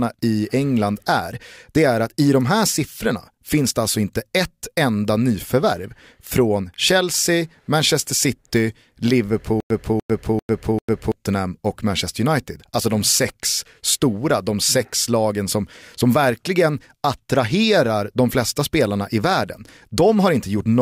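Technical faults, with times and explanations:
9.60–11.12 s, stutter with silent gaps: a 294 ms chunk of speech plays four times with 100 ms of dead silence between, likely a stream stalling and retrying.
13.83 s, repeated buffer: right after "de sex", a 1.33 ms slice plays twice, fitting a 64-sample buffer, so it's a tiny click before "stora de sex lagen".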